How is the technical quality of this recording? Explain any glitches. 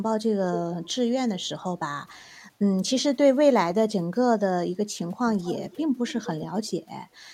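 Five times, a delayed copy of the speech trails the original, at 0.52–0.91, 1.39–1.48, 5.39–5.83, 6.07–6.34 and 6.63–6.71 s. It lags by 266 ms, later 253 ms, and ranges from clearly audible to barely there. It's echo leak, likely from a far-end loudspeaker whose echo canceller let speech return.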